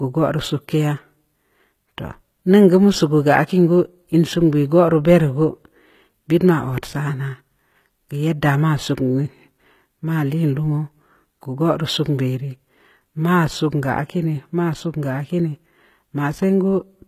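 The speech carries HE-AAC compression throughout. The treble looks rebuilt from lower bands, likely a low-bitrate coder around 20 kbps. Sibilants sound gritty and metallic, and nothing remains above 14.9 kHz.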